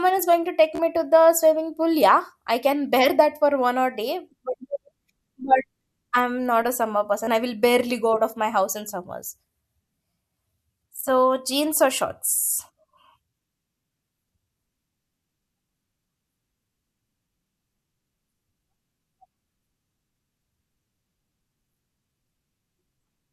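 Short buzzing stutters hit the speech at 0.75 to 0.80 s, 7.25 to 7.27 s and 21.30 s, a tiny slice repeating before the sound skips ahead. This is Bluetooth stutter: lost or late packets made the receiver replay its last buffer, losing 40, 27 and 13 ms.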